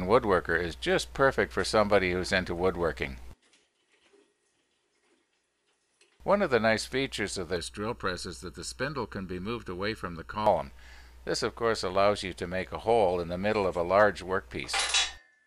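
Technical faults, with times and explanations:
7.56 to 10.46 s, channel delay (comb filtering). Here one channel arrives late by roughly 0.7 ms, and the two channels are folded to mono. Content shared by both channels then partly cancels itself. The cancellations fall at fixed, evenly spaced frequencies. The first notch sits near 700 Hz, with further ones spaced roughly 1.4 kHz apart above it. The sound turns hollow and phasey for this stretch. It returns to full body once the delay ends.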